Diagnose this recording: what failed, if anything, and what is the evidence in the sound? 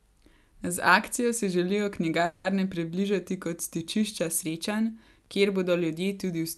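What failed is the network side of the call. From 2.25 to 2.46 s the audio stalls, and a fading buzzy continuation of the last sound fills about 190 ms. Playback then resumes right where it left off, so nothing is lost; everything after simply runs about 190 ms later. That's a call audio freeze, most likely from packets held up in transit that drained the jitter buffer. The concealment shows the Opus path's band top at around 12 kHz.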